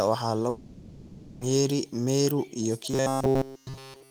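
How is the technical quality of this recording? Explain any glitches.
The recording has two clear glitches.

From 0.49 to 1.43 s there is a long network dropout. Audio likely stopped arriving for about 920 ms. The receiver stretched the last sound across the whole gap as a fading buzz and hiss. When the speech returns, that stretch of it is missing.

From 2.91 s to the end at 4.10 s the speech turns robotic. This likely comes from repeated short buffers. One tiny slice is replayed throughout while new audio is skipped. That imposes a steady 134 Hz metallic buzz, which fits a slice of about 7.5 ms.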